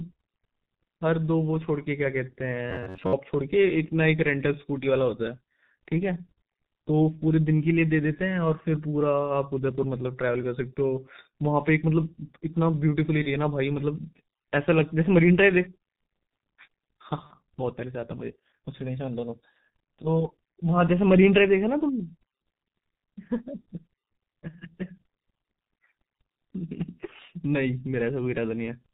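The whole clip of speech is squeezed through the G.723.1 codec, and it shows: nothing survives above 4 kHz, consonants smear, and there's a hoarse, muffled grain throughout, which fits its heavy low-rate mode around 6.3 kbit/s with slow voice-model updates.

From 2.70 to 3.13 s the sound turns into a rigid metallic buzz near 94 Hz, which is robotic sound from repeated short buffers. It's likely the player looping roughly 11 ms chunks while about half the real audio gets skipped.

Then at 13.22 s and again at 17.27 s there's VoIP packet loss concealed by the speech codec. Each time, the decoder bridges a missing stretch of about 30 ms by extending its last pitch and filter. You hear a brief smear that fades, with the voice sounding weak for a moment afterward.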